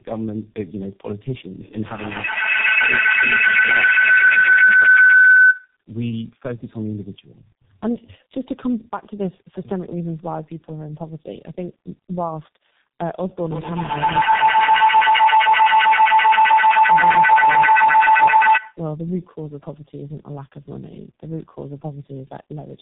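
This is a speech clip, and the whole thing suffers from tandem speech coding. It sounds like the call was decoded and re-encoded at each network border, with two low-rate speech coders stacked in a row. That fits a G.729A leg passed through G.711 and then into G.723.1 at 6.3 kbit/s. The second coder is working on the first one's damage, so the speech comes out rough, muffled and warbly throughout, with nothing above 3.8 kHz.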